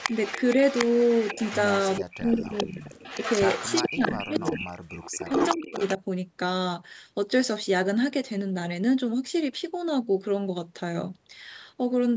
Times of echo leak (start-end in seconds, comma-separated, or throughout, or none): 0.00-4.71, 5.02-5.94